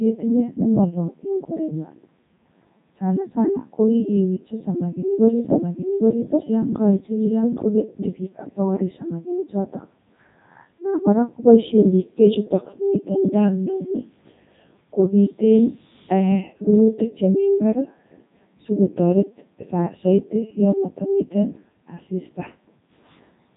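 Speech passed through the Codec 2 vocoder throughout, sounding robotic and buzzy, consistent with its 3.2 kbit/s mode; the spectrogram shows sine-built harmonics and nothing above 3.8 kHz.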